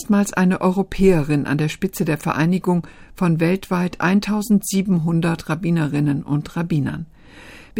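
No technical faults can be heard anywhere in the audio; the signal holds steady throughout without any audible disruption.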